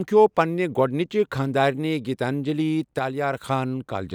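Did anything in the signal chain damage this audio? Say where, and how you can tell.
Yes. From 2.99 to 3.37 s the speech falls abruptly by about 6 dB and then snaps back, the sign of one channel dropping out before a mono sum, likely an intermittent analogue cable or connector. The waveform shows a flat-edged dip in level; the spectrogram dims evenly across all frequencies.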